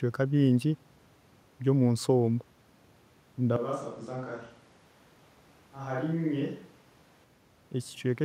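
A speech recording, with two overlapping faults. At 3.56 s the sound turns roomy and hollow all at once. The bass thins out. The level falls by roughly 10 dB. Background noise comes up to about 30 dB below the speech. At 7.24 s it snaps back to the close, full sound. The cause is likely a switch to a distant microphone, such as a camera's, standing in for a close one that dropped out. From 3.81 s to 4.85 s a second fault sits on top: a Bluetooth SBC bit pool drop. The treble goes dull. A gritty, grainy noise rides on the sound. The top sub-bands are starved and the rest are coarsely quantised. That fits the bit pool falling from 28 to 13, near 102 kbps, as the link struggled. Clarity returns once the rate recovers.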